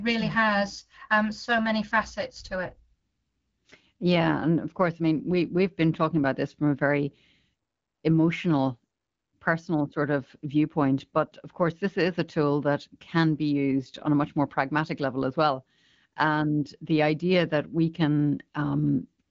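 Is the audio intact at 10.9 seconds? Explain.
Yes, the speech at 10.9 seconds is intact, with no dropout, click or distortion, and it sounds as clear as AMR wideband (HD Voice) coding at 12.65 kbit/s allows, with nothing above about 7.5 kHz.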